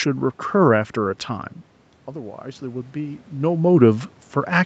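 From 2.08 to 3.3 s, automatic gain rising: after the speech level at the microphone drops by about 11 dB, the gain control slowly adds about 3 dB. Unlike the talker simply moving closer, the room noise swells along with the voice.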